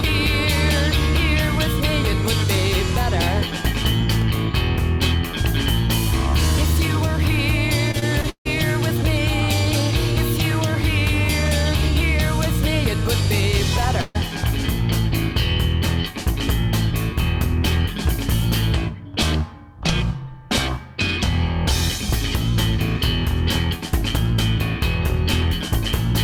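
From 4.22 to 12.21 s, periodic USB or driver dropouts blank about half a millisecond every 2.0 s, giving roughly five evenly spaced ticks rather than the choppier irregular gaps of network loss. Between 7.91 and 8.47 s, repeated packet loss produces a robotic chop: four holes, the longest 157 ms, patched by repeating sound, concealing nearly 40% of the stretch. At 14.01 to 14.17 s, a single burst of packet loss removes about 140 ms, and the last sound is stretched and faded across the gap before the audio resumes further on.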